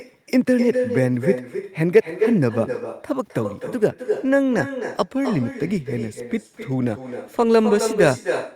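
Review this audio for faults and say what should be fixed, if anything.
Echo with no canceller runs throughout the speech. Every phrase is trailed by a second copy arriving roughly 300 ms later, about 7 dB below the direct signal, and sounding thinner. The far end is playing the call through a loudspeaker, its microphone captures that playback along with the room, and nothing subtracts it before it is sent back, so the talker's own audio returns after the network round trip. Enable acoustic echo cancellation at the far-end device, or have that participant use a headset.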